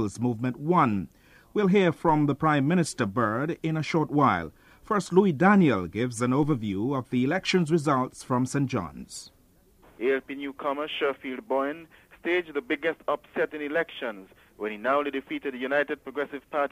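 At 2.09 s and again at 6.43 s, a DC step, a sudden offset of about -33 dBFS that sinks back through a roughly 2 Hz high-pass, gives a low thump while the sound carries on uninterrupted, unlike a dropout.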